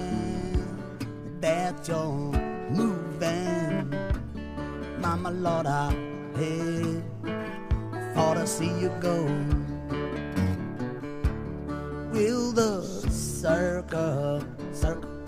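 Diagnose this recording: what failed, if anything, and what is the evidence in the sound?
Nothing failed; no stage shows an audible fault.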